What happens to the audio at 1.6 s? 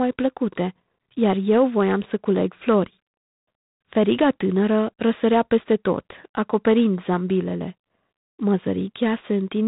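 At 1.6 s the speech carries G.726 ADPCM damage, which runs through the whole clip. Each sample is coded as a coarse difference from an adaptive prediction, and the plainly audible harsh, rasping hiss rising and falling with the speech level fits G.726 at 24 kbit/s. Nothing passes above 3.9 kHz. On a spectrogram, energy stops at a flat ceiling near 3.9 kHz, with a grainy noise floor filling the speech band and tracking each syllable.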